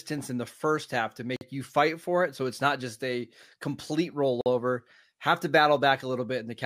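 At 1.36 s, between "the first half to" and "you fight for it", and again at 4.41 s after "not just a complete", the speech drops out for 48 ms: a gap between chunks, with silence inserted at joins spaced 3 s apart. Each is a hard-edged hole, shown as a flat waveform segment and a clean vertical blank stripe on the spectrogram.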